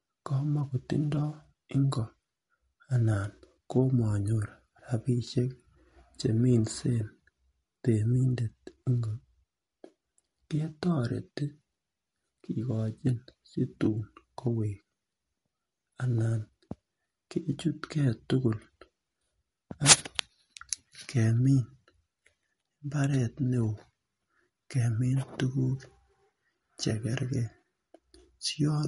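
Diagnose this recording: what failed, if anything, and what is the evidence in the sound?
Codec stage, whole clip. Treble ends at 11.2 kHz; speech sounds watery. Likely MP3 compression, bit-starved, which fits about 48 kbps.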